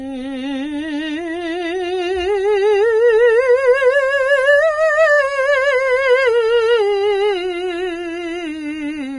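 A music clip, damaged throughout by what is likely Vorbis compression. Nothing is left above about 10.6 kHz, so the top end sounds dull and closed in. The treble that remains is hissy and grainy. Tones have a rough edge. Attacks are smeared rather than crisp. The coder has quantised the high-frequency detail so coarsely that it turns to noise. The damage is heavy, which fits a very low bitrate of around 26 kbps.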